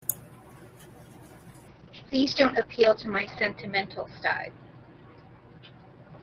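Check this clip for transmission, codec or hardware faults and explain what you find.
One fault is present: a call bitrate drop running from 1.69 s to the end of the clip. The call's bandwidth estimate fell, and the encoder was instructed to cut its rate from 32 kbps to about 7 kbps, holding the lowest rate for 1.82 s. Starved of bits, the Opus encoder codes the speech more coarsely and narrows its bandwidth from 20 kHz to 6 kHz, so the speech turns muffled, rough and watery, losing its crisp high end.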